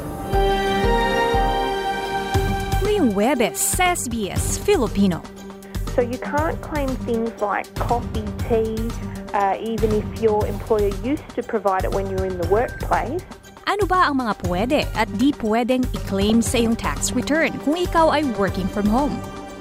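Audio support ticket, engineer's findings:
DAB burbling, 12.45 to 13.06 s: burbling over the programme for about 0.6 s. Weak reception; bit errors, probably under 1%, slip past error correction into the MP2 stream and corrupt sub-band samples and scale factors.

DAB burbling, 16.30 to 17.23 s: same burbling, about 0.9 s. Individual sub-bands jump in level frame by frame, which points to a few dozen corrupted frames. Receiver/antenna side, not the source.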